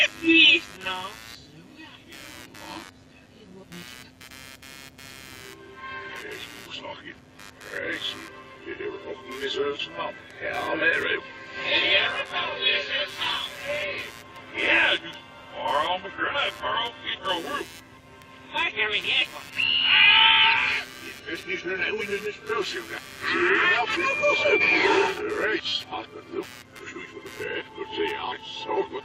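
Under the whole clip there's computer activity noise, a buzz pulsing at roughly 100 Hz, sitting something like 25 dB below the sound. That's processor or graphics load shifting the shared ground, so it tracks the machine rather than the audio.

At 2.58 to 2.60 s there's a repeated buffer: a tiny slice plays three times in a row with hard joins, which fits a 10 ms buffer being replayed when fresh audio arrived late. It comes across as a quick buzzy stutter, and nothing seems skipped afterward.

Then come damaged-data blips in the compressed stream at 9.78 s, 22.00 to 22.02 s, and 24.60 to 24.62 s. Each is a short glitch where the decoder misread corrupted frames and hunted for the next header.

Another repeated buffer hits at 25.68 to 25.72 s, this time with the same 10 ms chunk playing five times, so it's a longer buzz.

One last damaged-data glitch lands at 28.31 s.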